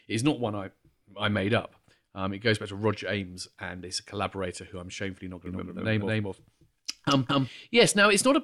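Speech clip with a doubled audio track from 5.46 to 7.48 s: an equally loud copy trails by roughly a fifth of a second, likely from a second, slower capture path.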